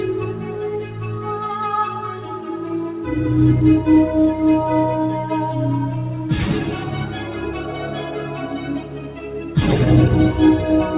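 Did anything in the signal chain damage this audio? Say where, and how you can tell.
Yes. At the call-processing stage, a noise suppressor built for speech was left running on this sound, applied to music or sounds it wasn't designed for. It treats sustained tones and tails as noise, so level swings by around 10 dB throughout: attacks pass, held portions and decays sink and pump.

The same suppressor also cut one passage from 8.8 to 9.22 s, pulling it down by about 5 dB more than its surroundings. It misjudged that stretch as noise, so the sound dips. The 4 kHz ceiling fits a narrowband call codec.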